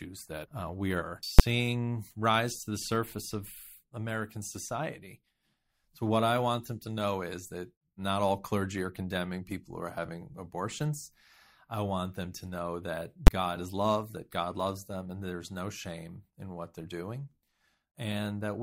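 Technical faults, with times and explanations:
1.39 s and 13.27 s: invalid numbers at full scale. Each is a single loud bang, right after "we are" and after "them to know that". A calculation produced invalid values, pinning the output at one extreme value for about 11 ms, which fits a 512-sample block. That block is too short for its start and end to separate, so it lands as one pop.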